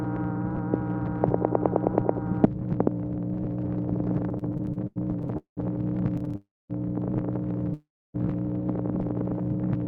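From 4.29 to 5.59 s the audio stutters. This is repeated stalls. Packets arrived late, so the jitter buffer kept running dry. There are 14 gaps, filled with about 0.45 s of stretched sound. The longest lasts about 0.2 s. Roughly a third of the span is filler. The sound drags and catches. A shorter burst follows from 6.17 to 6.36 s: five tiny stalls, none over 14 ms.

At 6.36 s the audio freezes until 6.72 s. The last sound hangs briefly, then fades to silence for about 0.24 s. The audio then resumes where it stopped, pushed 0.34 s later. A second call audio freeze runs from 7.74 to 8.16 s. It holds, then goes silent for about 0.29 s, adding 0.41 s of delay. Nothing is lost in either. The likely cause is packets held up in transit.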